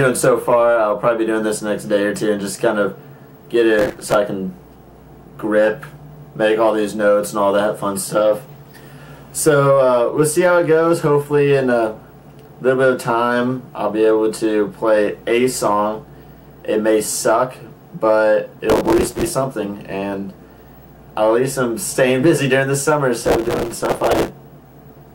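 Processor overload crackle appears at 3.79 to 4.15 s, 18.70 to 19.31 s and 23.24 to 24.28 s. Buffer deadlines are missed in quick succession. Each miss replays stale audio with hard edges. The fine grain suggests buffers of a few milliseconds. It sounds like gritty tearing.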